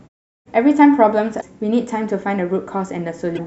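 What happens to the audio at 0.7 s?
At 0.7 s the speech plays through intact, with no dropout, distortion or other fault at that moment.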